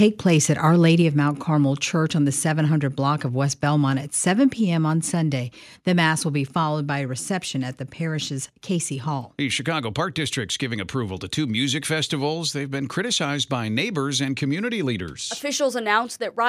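At 1.02 s and again at 4.53 s the speech drops by about 2 dB in a single step, a microphone volume stepped down, likely the call software lowering input gain. The waveform envelope shrinks abruptly, and the spectrogram dims uniformly across all frequencies.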